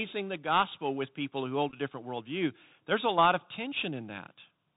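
From start to finish the speech has been through the Bluetooth CVSD headset codec, and its damage is plainly audible. CVSD codes each sample as a single up-or-down bit at 64 kHz with an adapting step, so nothing above 4 kHz survives. On a spectrogram the energy stops at a hard ceiling near 4 kHz, with a grainy noise floor smeared under the speech. Sibilants sound scratchy, and loud high-frequency moments distort where the step size cannot keep up.

Between 1.70 and 1.77 s comes a Bluetooth headset packet repeated fault. Packets went missing and the chip decoded the previous packet's bits again in their place. About 18.8 ms of audio was lost in short runs of only a few milliseconds, spread across roughly 30 ms. That fits about five lost packets. It sounds like a brief rough buzzy flutter rather than a dropout. The waveform shows short stretches of identical repeated cycles, and the spectrogram shows harmonic lines spaced near 267 Hz.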